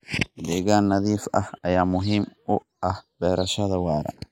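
From start to finish the two channels are drifting apart. They were captured on separately clocked devices, and a clock mismatch of around 200 ppm lets one side slide steadily behind the other, reaching about half a millisecond by the end. Fold the speech to mono and the resulting comb notches creep through the spectrum, so you hear a slow, swirling flange that keeps moving across the whole clip.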